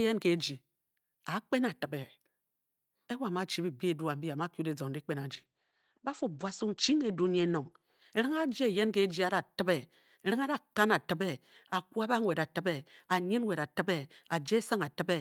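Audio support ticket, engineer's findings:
Call bitrate drop, 5.32 s to 10.91 s. Speech turns rough, watery and muffled as the top end disappears. Cutoff falls from 20 kHz to 8 kHz. The worst stretch lasts about 1.8 s. Probable component: Opus encoder following a falling bandwidth estimate. The coarser coding fits a drop from 48 to 12 kbps. Clarity returns once the bitrate recovers.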